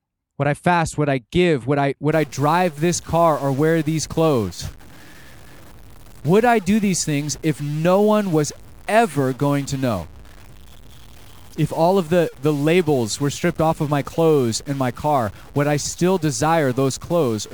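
From 2.12 s onward, buzzy distortion and noisy pauses show waveform steps of about -35 dBFS and broadband spectrogram haze; the likely cause is a stuck bit.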